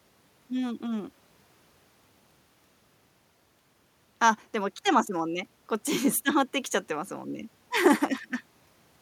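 Nothing goes wrong anywhere in this recording, so there's nothing to flag here.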